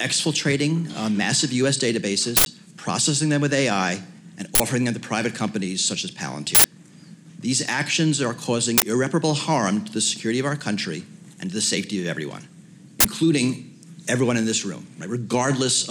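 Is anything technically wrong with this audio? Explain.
Yes. Uninitialised buffer bursts occur at 2.37–2.46, 4.55–4.60, 6.55–6.64, 8.78–8.82 and 13.00–13.05 s. Blocks were played before any audio was written, so leftover memory became samples: abrupt, loud digital noise lasting about 93 ms or 46 ms, consistent with 4096- and 2048-sample buffers.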